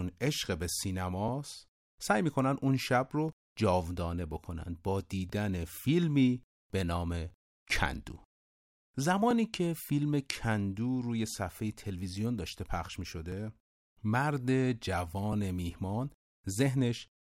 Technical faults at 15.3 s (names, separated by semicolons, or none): overlapping chunks